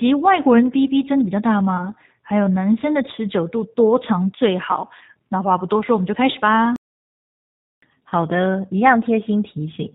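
G.729 codec damage runs through the whole recording. The 8 kbit/s coder models the speech with a vocal tract filter, a pitch predictor and a few pulses per sub-frame, and nothing above 4 kHz survives. The result is plainly rough and synthetic, with a muffled top end.

VoIP packet loss concealed by the speech codec appears from 1.77 to 1.91 s. A gap of about 20 ms, which fits a single lost packet, was covered by the decoder extrapolating its last pitch and filter at falling gain. The speech smears briefly into a fading buzzy tone or coloured noise and stays weak afterwards while the decoder's state recovers.

A playback stall runs from 6.76 to 7.82 s. The sound stops in mid-flow and stays silent for about 1.06 s before resuming. This is likely the player running out of data or its output thread being blocked.

The same packet-loss concealment returns at 8.09 to 8.12 s, again pointing to one lost 20 ms packet. 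Here the recovery is quicker: a short concealed patch lasting about 36 ms before the speech returns to its codec-limited quality.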